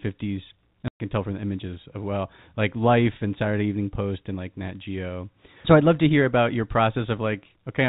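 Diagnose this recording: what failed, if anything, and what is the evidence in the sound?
The network dropped audio: packet loss filled with silence cuts the speech from 0.88 to 1.00 s. The gap lasts 120 ms, which fits six lost 20 ms packets, and the receiver played pure silence in their place rather than concealing the loss. On the waveform this is a flat line with abrupt edges on both sides. On a spectrogram it is a clean vertical blank stripe across the narrow telephone band of the G.711 stream.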